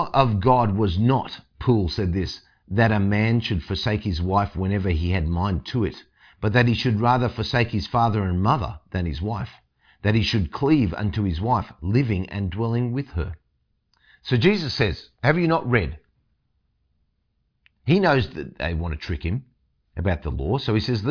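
Nothing in this recording trips any alarm, since there's no dropout, glitch or distortion to point to anywhere along the way.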